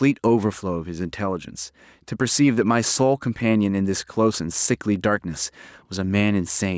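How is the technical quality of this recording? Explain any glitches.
The recording has one fault, gain pumping, which runs through the whole clip. The speech level stays oddly even, with little difference between loud and soft syllables. The gain ducks by roughly 5 dB as each loud sound arrives. The cause is likely a microphone gain set far too high, with a fast limiter or compressor clamping down on every peak and releasing between them. The result sounds squashed. The call's microphone processing leaves nothing above 8 kHz, which is normal for that path.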